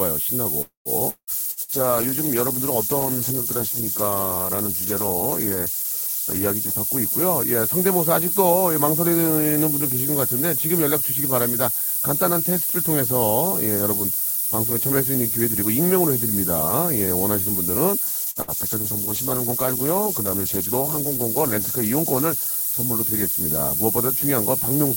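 Low bit depth with noise shaping runs through the whole speech clip. The signal is carried on what sounds like only 4 bits, and the rounding error has been pushed upward in frequency rather than spread evenly. The result is a constant thin hiss that climbs steeply toward the top of the band and sits about 5 decibels above the speech itself, so it never drops out of hearing.

A call audio freeze follows from 0.61 to 0.88 s, likely caused by packets held up in transit until the jitter buffer ran dry. The receiver stretches the last sound into a fading buzz or hiss that becomes about 130 ms of silence, filling roughly 241 ms in all. Nothing is lost. The speech picks up where it stopped, but it now runs about 241 ms later than before.

A long network dropout comes from 1.09 to 1.30 s. Here likely no audio arrived, and the receiver again extends the last sound as a fading buzz or hiss, about 179 ms of concealment including around 60 ms of near-silence. 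Unlike the freeze, the speech returns further along. About 180 ms of it is simply gone, so the sound jumps forward rather than resuming in place.

A call bitrate drop begins at 1.24 s and lasts until 7.80 s. The encoder falls from 40 to 13 kbps and stays at that floor for about 5.2 s. At that rate the coding turns coarse and the high frequencies are trimmed, so the speech sounds rough, watery or muffled until the bitrate climbs back.

Bursts of packet loss strike inside that low-rate stretch, at 1.51 to 1.60 s and 1.63 to 1.71 s. Each removes about 60 ms of audio. The receiver covers the gap by holding and fading the last sound, which gives a brief held buzz on voiced sounds or a dying hiss on others. The speech then resumes slightly ahead, with the gap's content missing.

A second call bitrate drop runs from 18.1 to 24.36 s, again from 40 down to 13 kbps, this time holding the floor for about 3.7 s. 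It brings the same coarseness, with the top end cut away.

Two more bursts of packet loss fall at its start, at 18.30 to 18.39 s and 18.42 to 18.51 s. Each drops roughly 60 ms behind a short held buzz or fading hiss before the speech continues.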